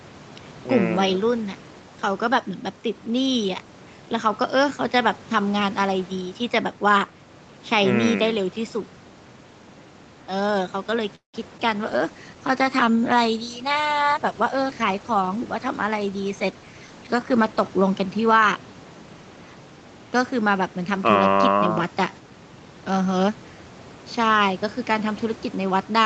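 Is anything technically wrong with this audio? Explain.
Yes, there are four faults, all between about 11 and 19 seconds into the speech.

From 11.15 to 11.36 s there is a call audio freeze. The last sound stretches into a fading buzz and then about 130 ms of silence. This is likely packets arriving late and the jitter buffer running dry. The speech resumes where it stopped, adding roughly 183 ms of delay with nothing lost. That separates it from packet loss.

At 11.58 to 11.61 s there is short concealed packet loss. About 20 ms of audio never arrived, and the decoder briefly extended the preceding sound before blending back. It is heard as a quick smear or wobble. Unlike the freeze, real audio is missing and no pause is inserted.

From 11.85 to 19.09 s a call bitrate drop takes the Opus stream from 40 to 15 kbps, holding the lowest rate for about 5.9 s. The reduced bandwidth estimate forces coarser coding, so the speech turns rough and watery. 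The normal 8 kHz codec ceiling is not the cause, because the roughness starts and ends with the drop.

From 14.14 to 15.61 s there is a jitter buffer speed-up. Excess buffered audio was trimmed by repeatedly cutting out short pitch-period pieces, removing about a fifth of a second. Speech runs at about 112% speed and sounds hurried. The pitch stays unchanged, which rules out a resampling error.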